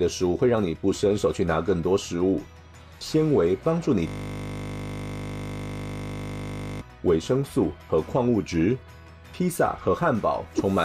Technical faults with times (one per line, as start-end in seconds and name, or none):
4.07-6.81 system hang loop